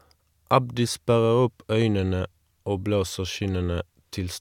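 Nothing in this speech recording jumps out as a technical problem; there's no glitch, dropout or odd moment anywhere along the way to point to.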